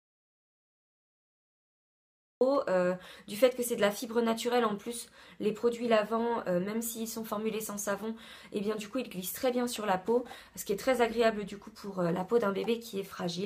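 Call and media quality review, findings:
Dead silence from clip start to 2.41 s, no room tone, then audio enters mid-flow. Audio dropout to silence, likely input loss with the encoder writing silence.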